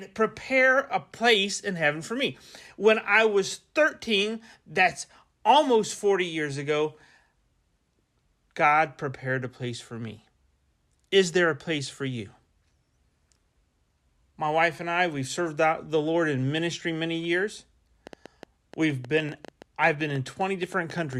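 From 18.07 s to 21.14 s, after "in ministry many years", a train of clicks runs at about 7.9 per second, unevenly spaced, some thirty in all, peaking near the speech level. It sounds like irregular ticking, likely from electrical interference or a faulty connection. On a spectrogram it shows as thin full-band vertical lines, and on the waveform as sharp spikes.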